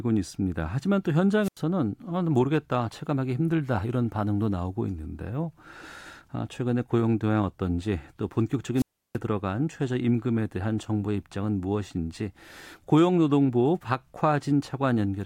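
Wireless microphone squelch dropout occurs at 1.42 to 1.61 s and again at 8.76 to 9.18 s. The radio link from the analogue FM microphone fades, hiss rises, and the receiver's squelch mutes the output, leaving holes of about 87 ms and 332 ms before the speech returns.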